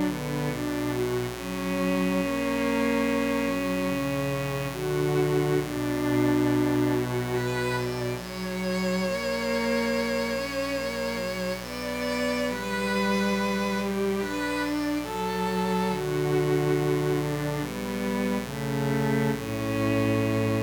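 A steady, raspy buzz sits under the audio for the whole clip, loud enough to stay only around 10 dB below the wanted sound. It is mains buzz at 60 Hz: switching spikes from something like a dimmer, a rectifier or an unshielded cable arrive twice per mains cycle and leak into the signal path, and their sharp edges spread energy across many harmonics of 60 Hz, well up into the kilohertz range.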